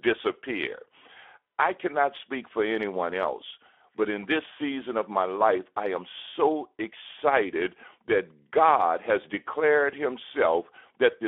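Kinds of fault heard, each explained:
Speex codec: a CELP speech codec short of bits for its excitation, leaving the speech plainly hoarse and grainy inside a 300 Hz to 3.5 kHz band, which fits about 11 kbps. Plain band-limiting would dull the highs without roughening the voice itself.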